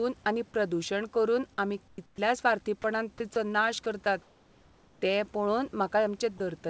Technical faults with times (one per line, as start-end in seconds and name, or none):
1.88-2.18 comfort noise in place of the background
2.16-2.18 onset clipped by the voice detector
2.82-2.84 sound dropped by the voice detector
3.34-3.36 sound dropped by the voice detector
3.84-3.86 sound dropped by the voice detector
4.22-5.02 comfort noise in place of the background
6.38-6.40 sound dropped by the voice detector